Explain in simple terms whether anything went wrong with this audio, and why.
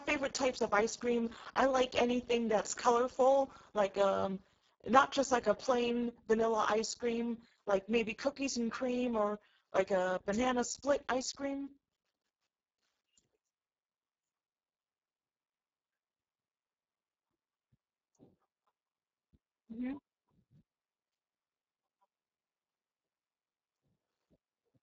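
The speech sounds noisy, hoarse and a bit robotic from start to finish, because it went through the Speex codec at a very low quality setting. There's too little data to rebuild the voice properly, and nothing at all comes through above 7.7 kHz.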